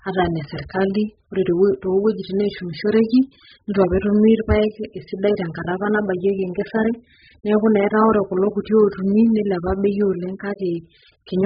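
Speech runs through the whole clip with heavy codec damage. Nothing is heard above about 5 kHz, so the sound is dull and muffled. Sibilants lose their edge and turn fizzy. Sustained sounds warble and smear. The likely cause is AAC compression, in its AAC-LC form, at a very low bitrate. The damage fits roughly 8 kbps. At that rate the encoder drops the top of the spectrum and cannot code the rest cleanly.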